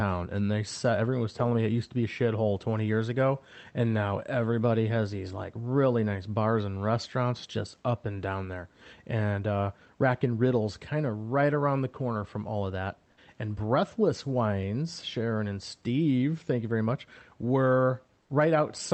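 From 18.21 to 18.29 s, the room background gives way to comfort noise for 80 ms. The gap sounds smooth and featureless, about 5 dB quieter. The sender likely paused transmission during silence, and the receiver filled it with synthetic noise.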